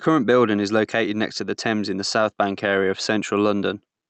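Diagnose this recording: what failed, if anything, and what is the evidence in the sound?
Gain pumping runs through the whole speech clip. The swing is around 5 dB. Loud and quiet syllables sit close together, so the sound feels squashed. The stage is likely input gain set too hot, with a fast limiter or compressor clamping each peak. The top end stops near 8 kHz, as expected from the call codec path.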